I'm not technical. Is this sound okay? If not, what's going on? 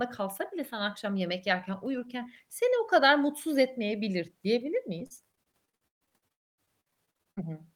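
No, it isn't quite okay. Right after "kadar mutsuz etmeyebilir diyebilir", from about 4.99 s to 7.41 s, the speech turns choppy and robotic. That's repeated packet loss, or robotic sound. Small chunks of audio kept going missing, a couple of dozen times, and each hole got covered by stretching out the sound just before it. About a third of that stretch is patched-over filler, and the longest single gap runs about 130 ms. That's why it sounds broken up.

Inside that rough patch, from about 6.32 s to 6.60 s, there's a quarter-second where the speech drops out completely and you mostly hear nothing before it comes back. That's most likely a long network dropout. The connection went quiet for that moment, the brief filler faded almost at once, and the part that was lost is simply gone, so the speech picks up again partway along.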